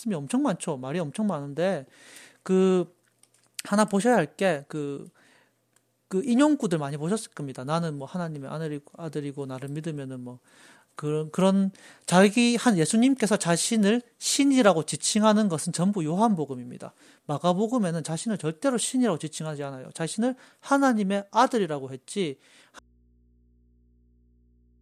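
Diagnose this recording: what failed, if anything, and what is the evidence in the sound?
The signal path was likely interrupted in the analogue wiring, with a connection lost ahead of an input that stayed live. The result is an audio dropout to a faint residue: at 22.79 s the speech cuts off abruptly and does not return before the clip ends. The gap holds only mains hum, about 35 dB below the speech level, the sound of an open input with no source behind it. The cut is instant, not a pause or a fade.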